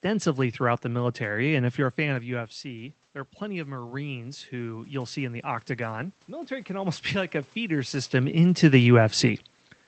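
From 2.23 to 7.0 s, automatic gain rising: the gain control responds to an input drop of about 11 dB, as the talker moves away around 2 s, by adding about 7 dB gradually. Speech and room noise swell together over nearly five seconds.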